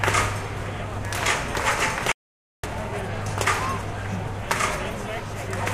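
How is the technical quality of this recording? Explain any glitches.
The recording has one glitch, an audio dropout to silence from 2.12 to 2.64 s. For about 0.52 s the sound cuts to silence with no room tone, then resumes mid-flow. The likely cause is a lost input, with the recorder writing silence until the signal returned.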